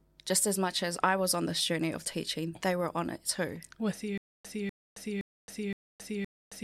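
From 4.18 s to the end, a 248 ms fragment repeats five times between 270 ms silences. This stutter with silent gaps likely comes from a stalled stream.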